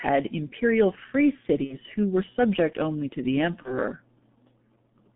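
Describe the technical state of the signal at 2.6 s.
At 2.6 s the speech carries G.723.1 codec damage, present throughout the clip. The sound is confined to roughly 150 Hz to 3.5 kHz and is heavily coded, which fits a rate near 6 kbit/s. Its slowly updated voice model makes the speech hoarse and smears consonants. That grainy roughness is what distinguishes it from plain telephone-band filtering, which would sound muffled but stay clean.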